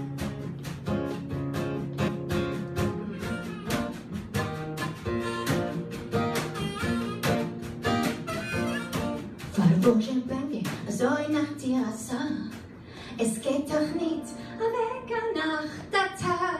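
At 2.07 s, 7.34 s and 10.52 s the audio jumps forward: compressed frames skipped. Whole coded frames never reach the output, so the decoder resumes further along the stream. The first gap loses roughly 150 ms, the others roughly 70 ms each, which points to several frames and then about three, given a 23.2 ms frame.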